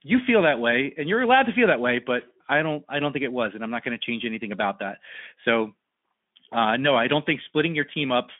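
No technical faults are audible.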